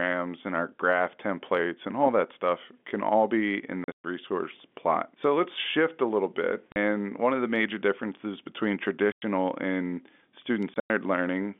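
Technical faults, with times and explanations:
3.84–4.04 s, 6.72–6.76 s, 9.12–9.22 s and 10.74–10.9 s, packet loss filled with silence: lost packets leave gaps of 20–120 ms that fit 20 ms packets, with hard edges. On the waveform they appear as flat silent stretches, and on the spectrogram as blank vertical bands across the band-limited telephone line.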